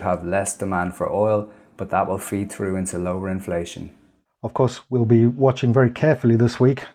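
No technical faults can be heard anywhere in the speech.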